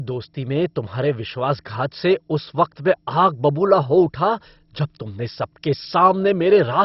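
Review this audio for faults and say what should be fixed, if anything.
MP2 compression damage runs through the whole speech clip. Nothing is heard above 5.6 kHz, so the sound is dull. Upper sub-bands flicker in and out, and what remains gurgles with coarse, granular distortion. The likely cause is an MPEG Layer II encoder starved of bits, which fits a rate near 32 kbps. To prevent it, encode at a much higher bitrate or use a more efficient codec.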